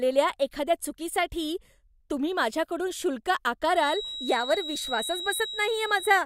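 A speech clip with a feedback whistle starting at 3.71 s, just after "चुकीसाठी तुम्ही माझ्याकडून शुल्क", and continuing to the end of the recording. A thin, steady tone at 3.9 kHz sits about 10 dB below the speech and swells and fades slowly in level without building up. The likely cause is a loudspeaker-to-microphone loop held right at the edge of instability, so a single high frequency keeps ringing rather than running away into full howl.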